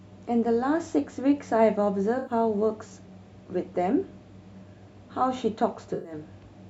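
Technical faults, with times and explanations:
2.18–2.32 s and 5.93–6.12 s, AAC frame loss with concealment: two short dropouts, about 85 ms and 107 ms, which fits four and five AAC frames going missing. The decoder patched each gap from the last good spectrum, so the speech briefly turns smeared and noisy before recovering.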